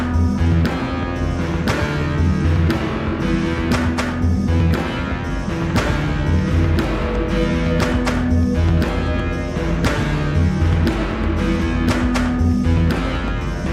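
No technical faults can be heard anywhere in this audio. There is nothing here that needs a timestamp or an explanation of what went wrong.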